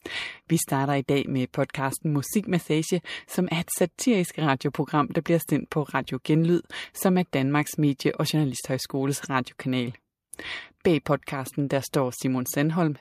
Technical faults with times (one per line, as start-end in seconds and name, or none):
none